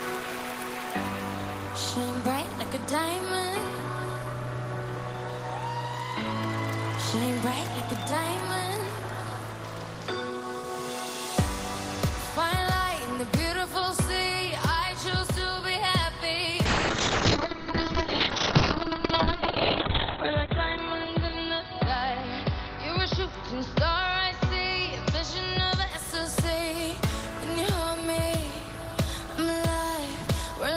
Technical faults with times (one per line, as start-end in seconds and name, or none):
16.66-25.96 call bitrate drop